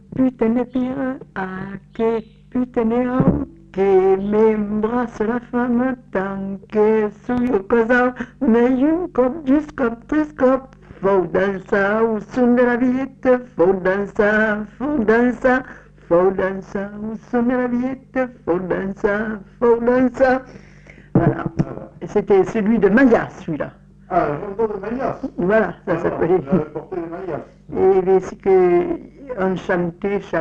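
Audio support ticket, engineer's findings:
Likely voltage transient from plug, switch or static hitting the chain. Loud pop, a double thump at 7.38–7.51 s, a few dB above the sound, which continues underneath.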